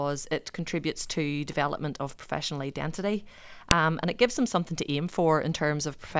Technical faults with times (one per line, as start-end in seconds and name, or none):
3.71 file header played as audio